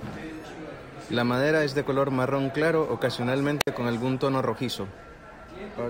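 Speech, with a wireless microphone squelch dropout at 3.60–3.67 s before "con algún tono rojizo": the radio signal fades, squelch mutes, leaving a 60 ms blank spectrogram gap.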